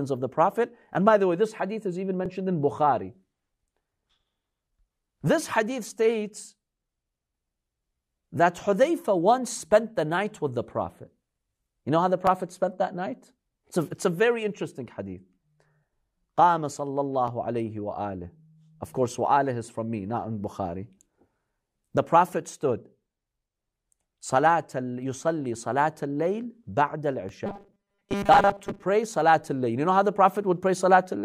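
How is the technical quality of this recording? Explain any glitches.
The recording has two kinds of glitches, both in the speech.

Overlapping chunks cause short stutters at 2.26, 12.27, 17.28 and 27.29 s. The audio was handled in 5-second chunks, and each chunk began about 7 ms before the previous one ended. That sliver plays twice at each join, giving a small click or hiccup.

Robotic sound from repeated short buffers runs from 27.46 to 28.83 s. The speech turns into a stiff, metallic buzz at 200 Hz. The likely cause is audio arriving too slowly, so a short buffer is replayed to fill the gaps. The 200 Hz pitch fits a 5 ms buffer. Most of the real speech in that stretch is skipped.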